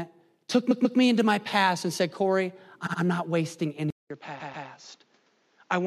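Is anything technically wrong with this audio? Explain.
Yes, there are two faults. Repeated frames cause stutters at 0.70 to 0.98 s, 2.86 to 3.00 s and 4.39 to 4.67 s. A short chunk (139.3 ms, 69.7 ms, then 139.3 ms) plays twice more, as if compressed frames were sent again.

At 3.90 s, after a 200 ms gap, the speech turns duller, a little quieter and picks up faint new background noise, with nothing above 7.6 kHz. The input likely switched to a poorer device.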